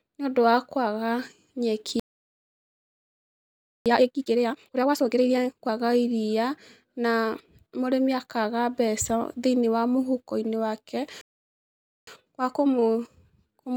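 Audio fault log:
1.996–3.86 s and 11.21–12.07 s, playback stall: the speech cuts to silence mid-flow for about 1.9 s, then about 0.86 s. Output likely starved of data or blocked on its thread, so nothing reached the converter until buffering recovered.
3.86–5.72 s and 12.07–13.77 s, time-compressed catch-up: after each stall the speech runs hurried at normal pitch, 2x after the first gap and 1.15x after the second, as short segments are dropped and cross-faded to clear the backlog.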